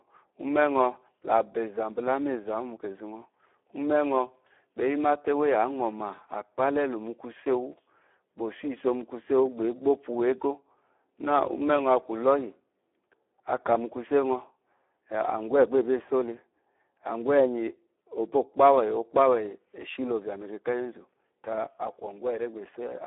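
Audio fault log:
Throughout: Speex codec. The speech is confined to a telephone band of roughly 300 Hz to 3.5 kHz, with nothing above 3.8 kHz. Heavy damage makes it sound noisy and hoarse, which fits a low bitrate near 8 kbps that starves the excitation signal of bits.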